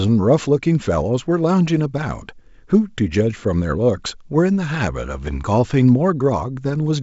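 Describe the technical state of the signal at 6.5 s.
At 6.5 s the signal is intact, with the speech carried cleanly through the G.722 wideband telephone coding at 64 kbit/s and any coding trace faint at most.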